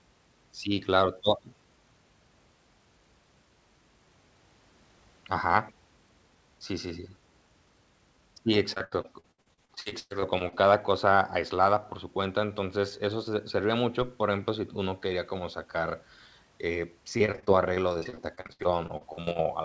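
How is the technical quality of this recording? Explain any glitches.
Two bursts of repeated packet loss (robotic sound) mar the speech, heard over a call path with nothing above 8 kHz, which fits G.722.

Repeated packet loss, 8.74–10.54 s and 17.18–19.47 s. Lost packets are patched by extending prior sound, covering about a third of each stretch, with gaps up to 108 ms. Speech turns choppy, with pieces missing.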